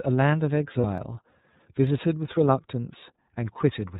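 Right from the start the whole clip carries the iLBC codec, and it's plainly audible. The speech is band-limited, with nothing above 4 kHz, and there's a slightly rough, synthetic edge to it because the codec rebuilds the excitation frame by frame without borrowing from earlier frames. The texture fits iLBC's 30 ms frame mode at about 13.33 kbps, which is the coarser, lower-rate setting.

At about 0.81 s a lost iLBC frame shows up, lasting to roughly 0.85 s. The length points to a single missing 30 ms packet. The decoder fills the hole by repeating the last pitch cycle with a bit of noise mixed in, so you hear a brief held, faintly buzzy vowel-like smear instead of the real sound. Since iLBC frames don't depend on each other, the speech snaps back to normal right after.

Then there are two sharp clicks, at 0.98 s and 1.87 s, each a tiny discontinuity where the waveform jumps straight to a later value. 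These are likely dropped samples, a fraction of a millisecond each, far too short to remove any audible sound. On a spectrogram each would be a thin vertical line running across all frequencies, and by ear it's just a single crisp tick.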